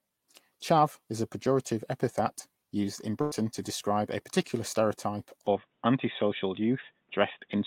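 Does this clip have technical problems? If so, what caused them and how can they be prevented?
Yes. At 3.21 to 3.33 s, right after "pejorative epithet used in", there's a burst of packet loss: roughly 100 ms never arrived in time, so the receiver stretched the last bit of sound and faded it for about 98 ms, then jumped ahead to "to describe a particular" with that stretch simply gone. Better jitter buffering or forward error correction on the link would prevent it.

From 5.47 s, just after "describe a particular stereotype", through to the end, the sound goes dull and narrow, with nothing above about 3.8 kHz and a new noise floor roughly 45 dB below the speech. There's no gap at the switch and no real change in level. That's most likely the input switched to a poorer device, such as a headset dropping into its call profile. Locking the input device for the whole session would prevent it.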